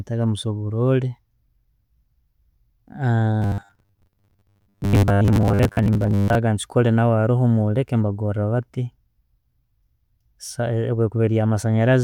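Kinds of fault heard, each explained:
Robotic sound from repeated short buffers: from 3.42 to 6.35 s the speech becomes a rigid, metallic buzz at 100 Hz, likely because incoming audio arrived too seldom and a 10 ms snippet was looped over and over, replacing most of the real signal.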